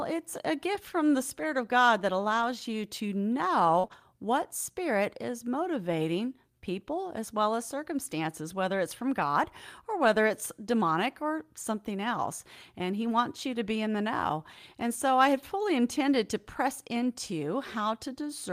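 Packets went missing several times, and in most cases the next packet carried a low-bitrate copy that the decoder played instead. This is lost packet rebuilt from error correction. There is no gap, but the speech turns briefly rougher and noisier at 1.43–1.45 s, 2.33–2.43 s (a rebuilt stretch of about 60 ms, which fits three lost 20 ms packets), 3.83–3.85 s, 3.92–3.94 s, 9.20–9.26 s, 10.04–10.06 s, 11.62–11.64 s and 17.00–17.06 s.

Around 3.8–3.9 s the losses cluster, and twice no usable copy arrived in time, causing short concealed packet loss. At 3.79–3.85 s about 40 ms was missing, and at 3.87–3.92 s about 20 ms. In both cases the decoder extended the preceding sound and blended back. This comes across as a quick smear or wobble interleaved with the rougher rebuilt frames, so the whole stretch sounds unsteady.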